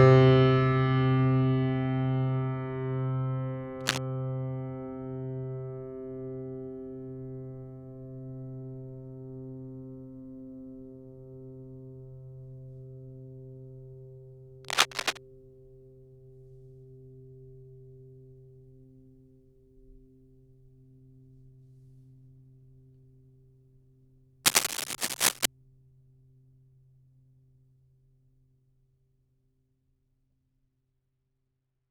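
Cable scratch noise at 3.8–3.98 s, 14.6–15.2 s and 24.4–25.5 s: dense, uneven scratching about as loud as the music, likely from a worn cable or connector being moved.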